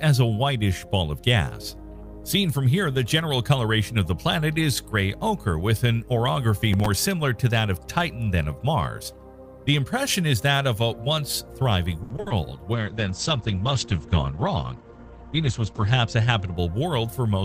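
The audio carries three separate faults. From 6.73 to 6.86 s there is a short burst of processor overload crackle. The processor fell behind on buffers that sound like a few milliseconds each and missed a handful of deadlines in a row. Each missed slot was filled by replaying stale audio, so the hard-edged splices stack into a gritty tearing over the sound for about an eighth of a second, then clear.

At 12.03 to 12.32 s there is repeated packet loss, heard as choppy, robotic sound. Four dropouts land close together, the longest about 70 ms. Concealment stretches the preceding sound across the holes for roughly 170 ms in total and covers about 59% of that stretch. About 100 ms of material is simply gone, leaving a stuttering texture with pieces missing.

From 12.73 to 16.62 s a call bitrate drop takes over. The coarse, watery coding points to the encoder falling from around 48 kbps to around 11 kbps. 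The audio bandwidth also collapses from 20 kHz to 8 kHz, so the top end is cut off and the sound turns muffled. The worst of it lasts about 3.2 s before the quality recovers.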